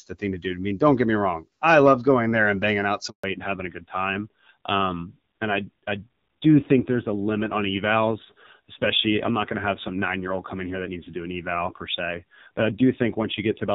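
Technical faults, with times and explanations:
3.10 to 3.24 s, handover gap: right after "there and banging out" the speech cuts out for 140 ms. The call was switching networks and no speech frames got through, so the sound dies quickly and stays silent until the new link starts. Anything said there is lost.
3.24 s to the end, fallback to narrowband: the call drops out of HD Voice, which before this point sounds like AMR-WB at around 12.65 kbit/s, into a narrowband codec. Everything above 4 kHz disappears and the speech turns duller and rougher, which fits an AMR-NB rate of about 5.9 kbit/s.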